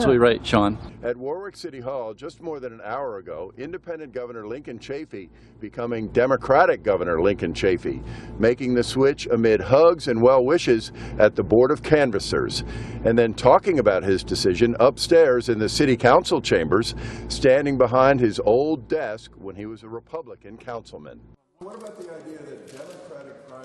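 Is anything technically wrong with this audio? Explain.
Yes, there's zipper noise on three level moves: a drop from 0.54 to 1.36 s, a rise from 5.74 to 6.2 s, and another drop from 18.34 to 19.68 s. Each move covers roughly 15 dB in hard 2 dB jumps with no smoothing, around ten steps a second on the drops and about twenty on the rise. Every jump puts a tiny click in the waveform, so you hear a ticking zip riding on the sound while the level moves.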